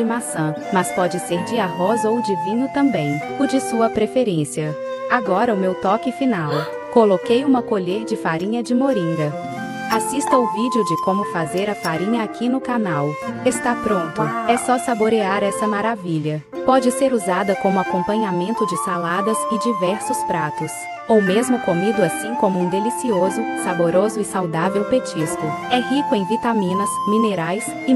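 At 7.57 to 7.59 s a single loud pop, likely a voltage spike, thumps a few dB above the sound, showing as a sharp waveform spike and a thin full-band spectrogram line.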